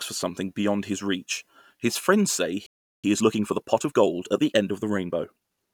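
A speech clip with a playback stall followed by time-compressed catch-up. Right after "reach his friends say", at 2.66 s, the sound cuts out mid-flow. Silence lasts about 0.37 s, until 3.04 s. The player likely ran out of buffered data or had its output thread blocked. Nothing reached the output until it recovered. Speech then resumes where it stopped. From 3.04 s to 5.52 s the speech is hurried, running 1.15 times faster than normal. The pitch stays where it was. The player is working off the backlog the stall created. It cuts out small slices of audio and cross-fades the joins. Normal pace returns at 5.52 s, once the delay is recovered.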